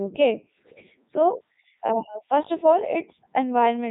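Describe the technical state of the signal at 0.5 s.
At 0.5 s the speech is passing through the Codec 2 vocoder, which affects the whole clip. Only pitch, voicing, energy and a spectral envelope survive, rebuilt from sine waves. The result sounds robotic and buzzy, with nothing above 3.8 kHz, here in the 3.2 kbit/s mode.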